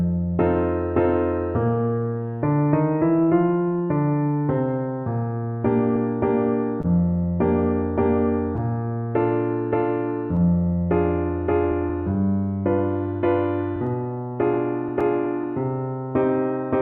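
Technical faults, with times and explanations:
throughout, clock drift between sender and receiver: the sender's clock runs roughly 1.5 percent slow, so the receiver's buffer keeps draining and the timing wobbles unevenly.
0.26 to 15.69 s, repeated timing corrections: to stay in step, the receiver keeps repeating small pieces, playing at 99 percent speed and adding about a fifth of a second overall.
6.82 to 6.86 s, short stall from a late packet: the buffer ran empty, so 20 ms of the last sound was held until the packet arrived, with nothing lost.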